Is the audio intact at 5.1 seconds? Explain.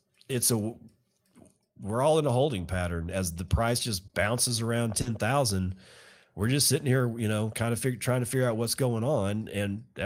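No. Around 5.01 to 5.07 s there is a short smear where the speech briefly wobbles and loses definition rather than dropping out. This is short concealed packet loss: about 40 ms of audio never reached the decoder in time, so the receiver extended the preceding sound to cover the hole and then blended back into the real signal. Any brief consonant in that stretch can be swallowed.

Overlapping it, from about 5.05 to 5.11 s, the sound turns rougher and noisier for about 40 ms. This is a lost packet rebuilt from error correction. The pattern fits two lost packets, each restored from a low-bitrate copy carried in the packet that followed. The decoder played those coarse copies in place of the originals, so there is no gap, only a brief drop in clarity.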